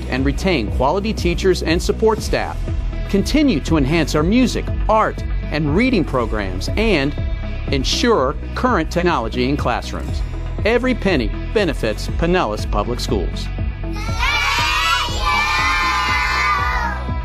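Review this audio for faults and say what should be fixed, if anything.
At 8.99 to 9.03 s the audio jumps ahead by about a tenth of a second, a case of compressed frames skipped. Roughly two whole frames were never played, which fits a frame length near 46.4 ms. A spectrogram shows a brief vertical mark with content abruptly shifted on either side, and the waveform shows a discontinuity with no real gap of silence. To prevent it, verify file integrity after encoding and transfer, and re-encode or re-copy from the source when the decoder reports damaged frames.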